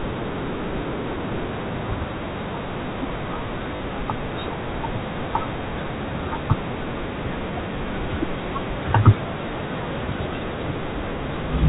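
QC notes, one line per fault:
3.76 to 3.80 s, packet loss with last packet repeated: a 40 ms gap, which fits two 20 ms packets, is filled by replaying the last packet twice. The repeats form a short run, so it stutters robotically over the band-limited G.711 telephone sound.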